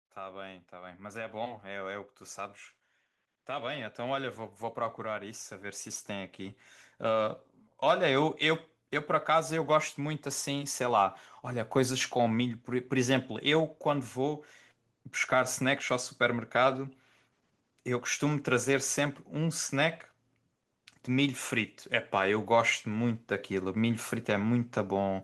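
Speech and background swell together from 0.18 to 2.14 s (about 4 dB) and 3.46 to 8.73 s (about 9 dB): automatic gain rising, as the control lifted a too-quiet input.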